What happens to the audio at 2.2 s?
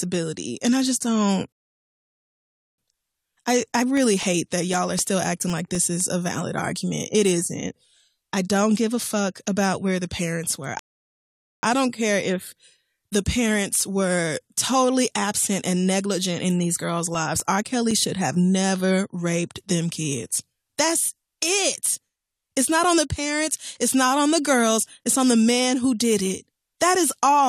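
At 2.2 s you're in a rebuffering stall: the player ran dry of downloaded data, so the speech goes silent from 1.52 to 2.78 s, then picks up exactly where it stopped.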